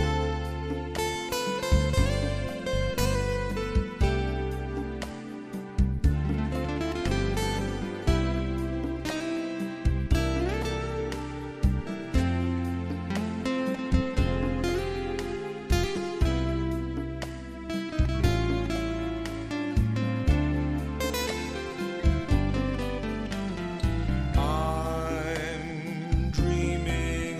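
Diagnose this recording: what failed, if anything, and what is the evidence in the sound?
The converter stage failed: sample clock jitter from 15.96 s to the end of the recording. From that point a fine hiss and roughness ride on the sound, growing with louder and brighter passages and disappearing in the quiet gaps. The clock timing wanders by something on the order of a couple of microseconds, so samples land slightly early or late. On steep, fast-changing waveforms that timing error becomes an amplitude error, roughly 40 dB below the signal.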